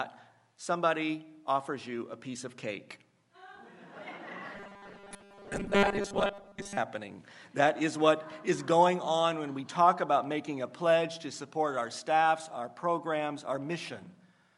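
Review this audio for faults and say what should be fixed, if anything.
From 4.55 to 6.77 s the sound turns into a rigid, metallic buzz at 200 Hz. This is robotic sound from repeated short buffers, likely caused by a 5 ms chunk being replayed while fresh audio is skipped for most of that stretch. On a spectrogram this appears as flat, evenly spaced harmonics at multiples of 200 Hz, and the waveform shows near-identical 5 ms cycles. A larger jitter buffer or smoother loss concealment would prevent it.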